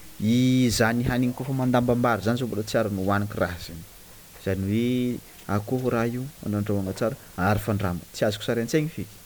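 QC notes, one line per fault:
Throughout: low bit depth with dither. The speech sits on a steady, even hiss about 25 dB below it, with no gritty distortion, because the 7-bit rounding error was randomised into white noise. A spectrogram shows a flat noise floor across all frequencies, and the waveform's silent gaps never reach zero.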